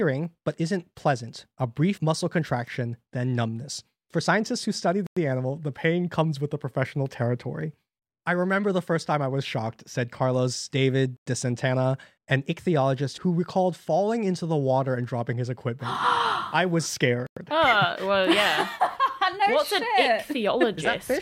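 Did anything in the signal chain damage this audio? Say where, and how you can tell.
Yes, at the chunk joins in storage or playback: a gap between chunks. 100 ms silences open at 5.07, 11.17 and 17.27 s, after every 6 s of sound. Unlike a dropout, nothing is missing; the speech simply resumes where it stopped, late.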